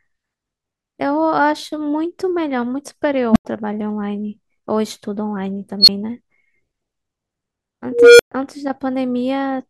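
A recursive filter in this speech clip has unstable coefficients, so its output feeds on itself, swells until it clips and overflows, then cuts out until it resets. This unstable filter fault produces three growing tones: around 200 Hz at 3.31–3.45 s, building over 50 ms with a 93 ms gap after; near 4 kHz at 5.80–5.89 s, a 76 ms build-up and 12 ms gap; and around 500 Hz at 7.92–8.32 s, a 274 ms swell then 122 ms of silence.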